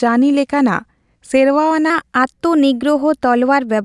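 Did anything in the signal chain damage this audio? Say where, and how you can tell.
Yes. From 1.90 s to the end at 3.84 s, the speech suddenly runs faster and higher. That is a wrong sample rate at playback. The rise of about 1.5 semitones and a 1.09× speed-up fit 22 kHz audio clocked out at 24 kHz without conversion.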